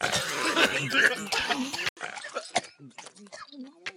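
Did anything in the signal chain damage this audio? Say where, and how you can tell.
Yes. At 1.89 s the sound drops out for 80 ms, then returns a few dB quieter, dulled above 10.5 kHz, with a faint new noise floor: likely an input switched to a poorer device.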